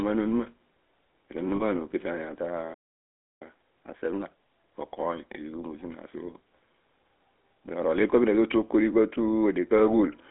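Speech runs through a GSM full-rate codec for its whole length. It has a buzzy, gravelly roughness and a narrow line band of roughly 250 Hz to 3.5 kHz, which fits the 13 kbit/s GSM full-rate coder. On a spectrogram, energy stops sharply at 3.5 kHz, and harmonics look smeared into coarse, regularly pulsed texture. From 1.56 to 1.63 s come lost GSM frames: about 40 ms, consistent with two 20 ms frames, where the decoder repeats the last good frame's settings. It is heard as a brief metallic ring, and a spectrogram shows a short band of frozen, repeated spectral shape rather than changing speech. A playback stall cuts the sound dead from 2.74 to 3.42 s, roughly two-thirds of a second of silence, likely because the player starved of data or its thread was blocked. The waveform shows a flat gap with an abrupt edge. Time-compressed catch-up follows from 3.42 to 4.74 s, with speech hurried to 1.5 times normal speed at unchanged pitch, as the player cross-fades out small pieces to drain its backlog. 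A spectrogram shows compressed syllable spacing with harmonics at normal height and discontinuities at the splice points.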